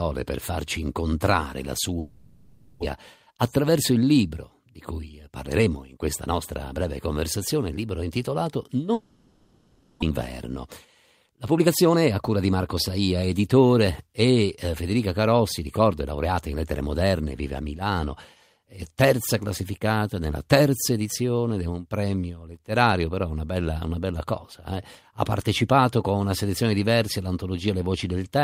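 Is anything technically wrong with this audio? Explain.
Yes. There are two long network dropouts and two jitter buffer speed-ups.

Long network dropout: after "per farci incontrare la" (1.99–2.84 s) and after "conversazione il libro intitolato" (8.93–10.12 s), the last sound is stretched into a fading buzz, and about 0.6 s of speech is lost each time, likely from packets that never arrived.

Jitter buffer speed-up: at 4.69–6.34 s (111% speed) and at 11.26–12.99 s (122% speed, ending before "editore e"), the receiver trims pitch-period slices to drain excess buffered delay. Speech sounds hurried at unchanged pitch.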